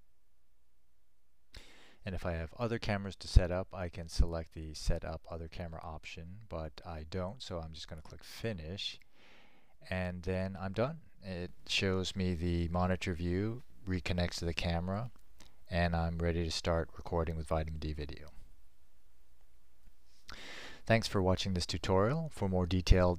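At 11.49 s the level steps up by about 7 dB in a single sample and stays there to the end of the clip, with the background noise rising along with the sound. This sudden gain jump is likely a gain setting applied without a ramp.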